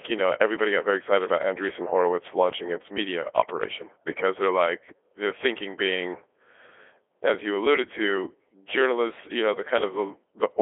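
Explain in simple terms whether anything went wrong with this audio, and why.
The whole clip went through a Codec 2 vocoder: the speech is rebuilt from simple tones, so it sounds robotic and buzzy, and nothing above about 3.8 kHz remains.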